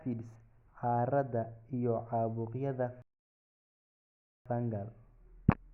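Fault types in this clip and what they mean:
Rebuffering stall: at 3.02 s, right after "iyo caabuqyada", the speech drops to silence until 4.46 s, then picks up exactly where it stopped. The player ran dry of downloaded audio and waited for more, so nothing is lost but about 1.4 s is added.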